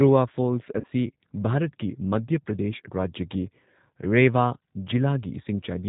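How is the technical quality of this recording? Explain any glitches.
The recording is intelligible speech but has clearly audible coding damage throughout, plus one short dropout near the start.

G.729 codec: The whole clip carries the rough, slightly synthetic character of a low-rate speech codec, consistent with G.729A at roughly 8 kbit/s. Speech is rebuilt from a vocal-tract filter, pitch predictor and a few pulses per frame, so nothing above 4 kHz survives and the sound is dull and slightly rough.

VoIP packet loss concealed by the speech codec: From 0.80 to 0.87 s, about 40 ms of audio is missing, which fits two lost packets. The decoder extended the previous pitch and filter at falling gain, so the gap is a brief, stretched, fading sound, and the speech stays weak or distorted for a moment after it returns.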